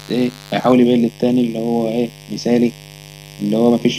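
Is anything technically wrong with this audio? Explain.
Yes. Mains buzz runs throughout: switching spikes at twice the 50 Hz mains rate add harmonics into the kilohertz range, giving a raspy buzz around 20 dB below the speech. From 0.72 s to the end, channel delay causes comb filtering: one channel lags by roughly 0.4 ms before the mono sum, cutting notches from about 1.5 kHz upward and making the speech hollow and phasey.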